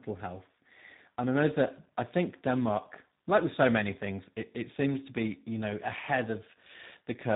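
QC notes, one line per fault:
Throughout: tandem speech coding. The sound passes through G.726 at 24 kbit/s, then G.711 mu-law, then G.729A at 8 kbit/s, so two speech coders run back to back. G.729A has to model audio that G.726 has already roughened, and their errors stack. That's why it sounds harsher, duller and more warbly than either codec alone. The band also stops at about 3.8 kHz, which adds to the muffled quality.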